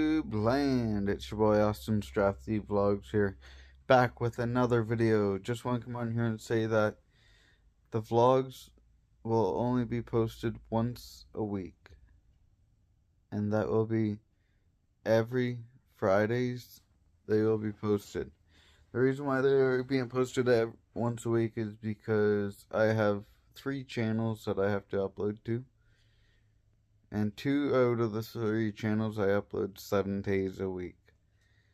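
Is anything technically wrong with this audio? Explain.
No, nothing is technically wrong with this audio.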